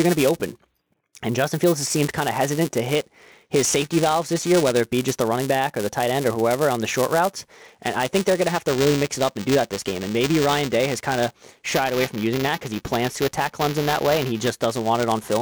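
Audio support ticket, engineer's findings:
Buffer tearing, whole clip: write and read pointers on the ring buffer slipped, crossing each period. A small slice of every buffer, a few percent, replays audio roughly 10 ms stale. Hard joins give a robotic 345 Hz buzz under the speech, consistent with a 128-sample buffer.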